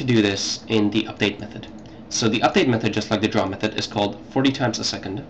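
A single sharp click at 0.85 s, most likely from dropped samples: roughly one sample missing, so the waveform jumps abruptly to a later value.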